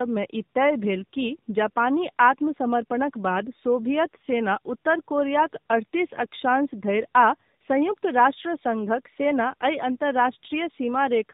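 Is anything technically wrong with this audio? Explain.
Yes. Throughout the speech, the audio shows tandem speech coding: it was decoded and re-encoded at a network boundary, so a second low-rate coder compressed the first one's already damaged output. The result fits two passes through a narrowband mobile codec such as AMR-NB at around 10 kbit/s, with a telephone-grade link between them. Coding losses stack, so the speech sounds rougher, more muffled and more warbly than one pass would leave it, with nothing above 3.8 kHz.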